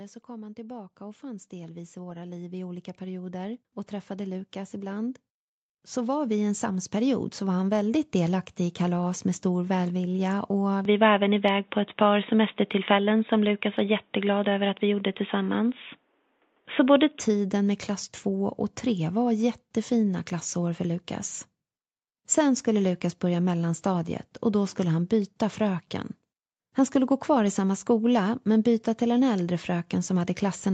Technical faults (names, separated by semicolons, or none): automatic gain rising